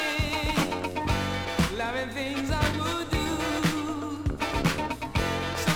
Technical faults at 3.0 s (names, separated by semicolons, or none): none